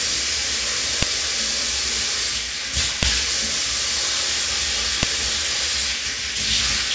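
At 1.03, 3.03 and 5.03 s a sharp, loud click cuts through the sound, every 2 s. This is a file header played as audio: leftover header bytes from each joined piece play as samples.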